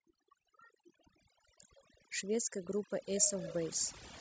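Overdone noise removal affects the speech from start to finish. A noise reduction stage set far too aggressively is gating individual frequency bands down or out whenever their level sits close to its noise estimate, and the quieter components of the voice fall below that line along with the noise. The background collapses into near silence scattered with twinkling, chirpy specks.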